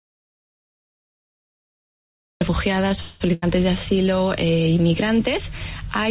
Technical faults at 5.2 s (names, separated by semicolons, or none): none